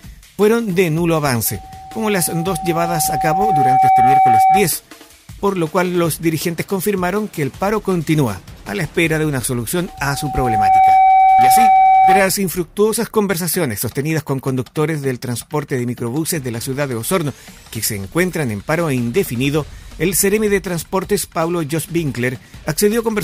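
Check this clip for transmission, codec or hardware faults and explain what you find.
One fault recurs twice, a loudspeaker feedback squeal, at 1.45–4.73 s and 9.87–12.35 s. Mic-to-speaker loop gain exceeds one at 762 Hz, so a pure tone swells over about two seconds, then about one, to roughly 10 dB above the programme. On a spectrogram it shows as a bright horizontal line; on the waveform, as a growing, even-amplitude envelope.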